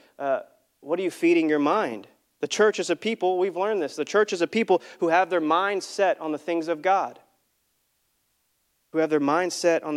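No technical faults are audible in this speech.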